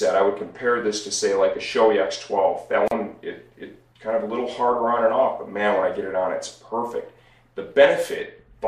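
A gap at a join of encoded pieces occurs from 2.88 to 2.91 s, a break of about 36 ms in otherwise continuous sound, after which the audio resumes where it left off. The sound was encoded in separate pieces, apparently about 6 s long, and joined without trimming. The start-up delay of one encoder run and the padding of the previous piece's last frame were left in place, so they appear as a short silent hole whose edges the codec softens.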